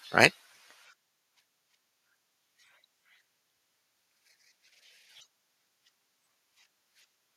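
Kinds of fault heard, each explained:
Microphone overload: input gain likely set too high pushed peaks about 4 dB past the converter's limit, flattening their tops into a brief harsh crackle at 0.23–0.25 s.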